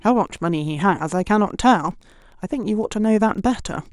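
Throughout the speech, Wi-Fi interference adds faint ticks every 102.4 ms, roughly 45 dB below the voice. A nearby radio's beacon is rectified by the audio circuit, and it shows as evenly spaced thin vertical spectrogram lines.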